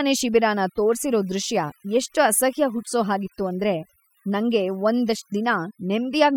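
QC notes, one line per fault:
Throughout: overdone noise removal, speech over dropped background with twinkling specks, from noise reduction set too strong, gating quiet bands.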